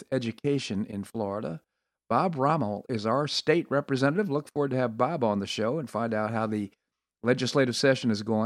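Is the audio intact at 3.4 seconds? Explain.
No, not quite. At 3.38 s, right after "is our", there's a dropped-samples fault: likely a single sample or so went missing from the stream, a tiny fraction of a millisecond. That's far too short to take out any of the speech, but the waveform jumps abruptly from one value to a later one, so you hear one sharp click, and the spectrum shows a thin vertical line at that instant.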